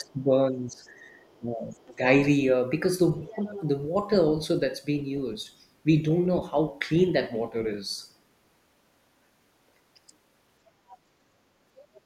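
From 0.0 to 0.84 s the speech is suppressed in double talk. It drops by about 20 dB. The echo canceller likely could not tell the talker from the loudspeaker echo, so it turned both down. From 0.77 to 1.39 s the other side's voice leaks through, but very faintly, about 40 dB below the speech. Residual echo likely got past the canceller. A second dip follows from 1.39 to 2.03 s, about 10 dB deep. A scrap of the far voice appears inside it, from 1.82 to 1.94 s. From 3.26 to 3.65 s the leak is clearest, only about 15 dB down. The talker's speech sags slightly under it, about 5 dB, from 3.35 to 3.56 s. Brief fragments of the other side return at 10.9 to 10.98 s and 11.94 to 12.01 s.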